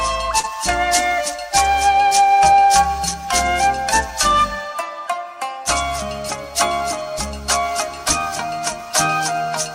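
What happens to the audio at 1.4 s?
Nothing goes wrong at 1.4 s; the audio runs on intact through that moment, with no dropout, click or distortion.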